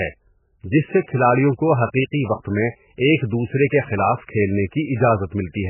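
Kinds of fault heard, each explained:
MP3 compression: Throughout this speech the sound has a watery, swirly quality and nothing remains above 3 kHz, which points to heavy MP3 coding at a very low bitrate, likely around 8 kbps. With so few bits, the encoder drops weak frequency lines that flicker on and off between frames and removes the treble above a fixed cut-off. The result is dull, muffled speech with smeared attacks.
Pre-echo: At 2.43 s a short hiss leads into an attack, spread over about 23 ms before it. A transform codec spreads its quantisation noise evenly across a whole block. When a sudden onset falls late in that block, noise sized for the loud part also fills the quiet moment just ahead of it, so the attack arrives softened and smeared.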